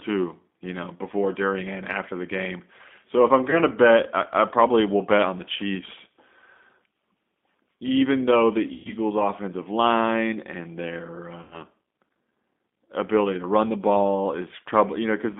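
Throughout, the speech sounds slightly rough and synthetic, confined to a narrow line band of roughly 200 Hz to 3.6 kHz. That is the G.729 codec at 8 kbit/s, which rebuilds each frame from a vocal tract model, a pitch predictor and a few pulses, with plainly audible damage.

Three dropouts follow, each heard as a stretched, buzzy tone or coloured noise that fades and leaves the speech weak for a moment afterwards. They are VoIP packet loss concealed by the speech codec. At 3.50 to 3.60 s, 30 ms is missing, which fits a single lost packet. From 8.73 to 8.92 s, 120 ms is gone, and from 11.42 to 11.61 s, 90 ms. Each time the decoder extended its last pitch and filter at falling gain. Because each frame builds on the one before, recovery lags after the audio resumes.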